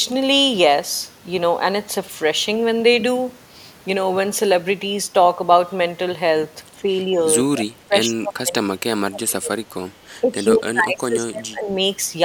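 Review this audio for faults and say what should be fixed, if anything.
Speech suppressed in double talk shows up twice. At 6.78 s the speech dips briefly, about 5 dB for roughly a tenth of a second. From 7.42 s to 11.79 s it is pushed down much harder, by up to about 25 dB, across roughly four seconds. The likely cause is the echo canceller mistaking near-end speech, talking over the far end, for its own echo and attenuating everything. Tuning its double-talk detection to favour near-end speech would prevent this.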